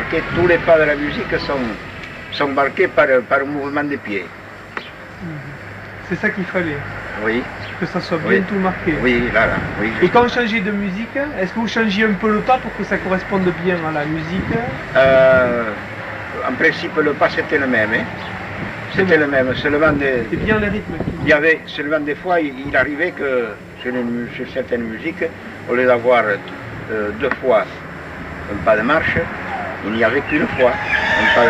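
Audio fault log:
No fault in this audio.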